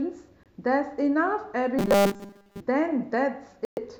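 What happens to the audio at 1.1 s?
Nothing goes wrong at 1.1 s; the speech carries on intact through that moment.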